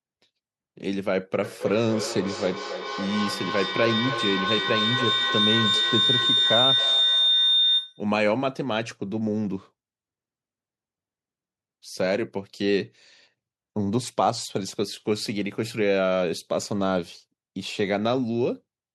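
Feedback howl runs from 1.43 s to 8.18 s. A microphone is picking up a loudspeaker carrying the same call, and each pass around that loop comes back louder than the last. The returning copies pile up and collapse onto a whistling tone around 4 kHz that pulses roughly every third of a second, the loop's round-trip delay. At its peak the howl stands about 2 dB above the speech before cutting off at 8.18 s.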